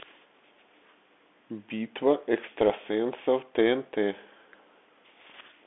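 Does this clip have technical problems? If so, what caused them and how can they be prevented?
Yes. Throughout the speech the sound is boxed into a narrow telephone band, roughly 250 Hz to 3.5 kHz. The sibilants sound scratchy, the loudest sounds rasp, and a fine granular hiss runs underneath. This is the Bluetooth CVSD headset codec, which fits a 64 kbps stream. It sends only one bit per step, saying whether the signal goes up or down, with an adaptive step size, so sudden loud high content outruns it and distorts. To prevent it, use a headset and host that support a wideband codec such as mSBC, or record through a wired microphone.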